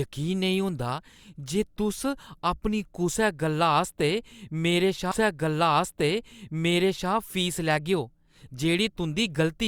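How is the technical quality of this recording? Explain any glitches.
The recording has one clear glitch. At 5.11 s a stream segment was repeated: the player queued the same segment twice, so about 2 s of speech replays through 7.11 s, with a small blip at the jump back.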